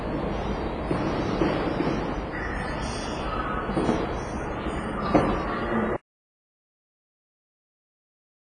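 From the start there's a washy, ringing quality with nothing above 10.5 kHz, the heavy smearing of likely WMA compression at what sounds like about 24 kbps. Then at 5.97 s it drops out to dead silence with no room tone and stays silent to the end, an audio dropout to silence, likely from the input being lost.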